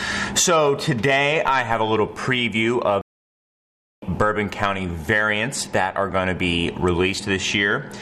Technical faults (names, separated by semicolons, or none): stream reconnect